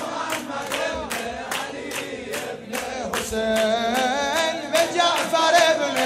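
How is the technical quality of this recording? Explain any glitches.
Nothing stood out on listening, and there were no glitches to explain.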